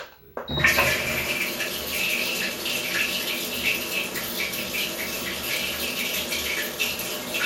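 Throughout the clip, the sound points to MP2 compression at a low bitrate, most likely an MPEG Layer II encoder running at around 80 kbps. At that rate the encoder can't fund all 32 of its sub-bands, so it drops upper bands entirely and quantises the remaining ones coarsely. The result is plainly audible: the top end is dull and keeps flickering in and out, and a gurgling, granular grit sits on everything that remains.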